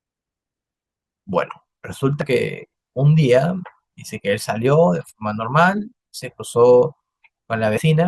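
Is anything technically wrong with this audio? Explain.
Yes. In this speech clip the audio jumps forward three times: at 2.21 to 2.26 s and at 7.77 to 7.82 s it lurches ahead by roughly 70 ms, and at 5.77 s by only a fraction of that. This is compressed frames skipped. Whole frames, consistent with 20 ms frames, were missing or rejected by the decoder, about three or four in the longer jumps and one in the shortest.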